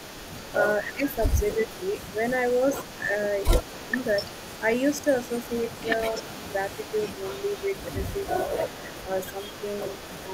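A faint second copy of the speech trails the talker by 246 ms throughout the recording, sitting around 20 dB below the main voice. This is an echo leak. The likely cause is a far end playing the call over a loudspeaker, where its echo canceller failed to strip out what its microphone picked up and sent that residue back down the line. The voice on the loudspeaker side also briefly sinks or thins in five places: 0.93 to 1.11 s (the deepest dip, roughly 15 dB), 1.55 to 1.59 s, 3.0 to 3.12 s, 3.82 to 3.93 s and 6.17 to 6.28 s. The last four dips run from a few decibels to around 10 dB. This is speech suppressed in double talk. It likely happens because both sides were speaking at once, and the canceller, unable to tell the near talker from the loudspeaker echo, ducked everything it heard.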